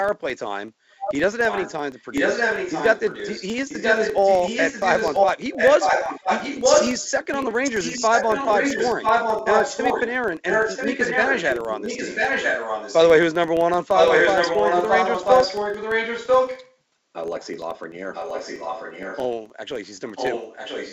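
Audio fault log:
throughout: filter restarted on every block. A buzz at 23.4 Hz runs under the whole recording and rises and falls with the speech level. Each processing block starts with the filter's memory cleared, so it begins from silence and throws a small transient at every block edge. That repeat rate fits a 2048-sample block. Because the ticks scale with the signal, they are loudest on strong syllables and nearly vanish in pauses. The band stops at about 7 kHz, as expected from the G.722 call path.
0.99–1.15 s, 1.49–10.12 s, 10.47–13.11 s, 13.93–16.7 s, 17.57–17.65 s, 18.14–19.24 s and 20.15–20.93 s: echo leak. A second copy of the speech trails the original by 0.99 s. From 1.49 to 10.12 s and from 13.93 to 16.7 s it is about as loud as the talker. It is somewhat quieter in the other long stretches and barely audible at 17.57 s. The likely cause is a far-end loudspeaker whose echo canceller let part of the returned signal through.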